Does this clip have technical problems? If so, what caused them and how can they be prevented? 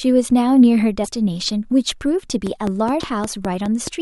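Yes. At 1.03 to 1.06 s and again at 2.99 to 3.02 s there is a broken MP3 bit reservoir, likely from frames lost from the stream. Each gap is about one 26 ms frame. The decoder then reads borrowed bits from the wrong frame, so the audio skips forward with a brief burst or hole. A spectrogram shows a narrow vertical smear or blank strip, and the waveform shows a jump. Preventing it means passing MP3 data through whole and unbroken, or cutting it only at frame boundaries with a reservoir-aware tool.

From 2.47 to 3.88 s a train of clicks ticks through the speech, likely from electrical interference or a faulty connection. There are roughly seven of them, regularly spaced at about 4.7 per second and peaking around 10 dB above the speech. They show as evenly spaced thin vertical lines spanning all frequencies, and as sharp identical spikes in the waveform. Shielding and grounding the cabling, moving away from noisy equipment and checking connections and the power supply would prevent this.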